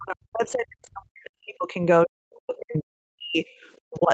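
From 0.0 to 3.45 s the speech dips hard and drops out in pieces, at its deepest falling by about 40 dB across roughly three seconds. This is speech suppressed in double talk, likely because the echo canceller mistook the talker for loudspeaker echo and muted both. From 3.76 to 3.8 s a very faint scrap of another voice, far below the speech, slips through. This is the other side's voice leaking through, likely residual loudspeaker echo the canceller failed to remove. The same deep suppression returns from 3.84 to 4.11 s, again gating the talker down by up to about 40 dB for a few hundred milliseconds, likely while both sides overlap.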